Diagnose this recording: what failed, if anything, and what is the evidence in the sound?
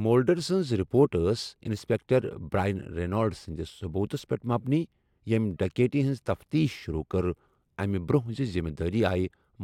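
No audible faults found.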